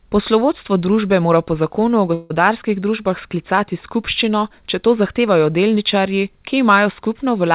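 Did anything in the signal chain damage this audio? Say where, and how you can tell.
Yes. At 2.14 to 2.32 s the sound stops advancing and the last moment is stretched into a buzzy tail that fades over about 160 ms, with no true silence, before the audio resumes with that stretch missing. This is most likely a long network dropout covered by the receiver's loss concealment. A local buffer underrun would leave a hard gap or click instead of a decaying continuation. The band-limit near 4 kHz fits the G.711 call path.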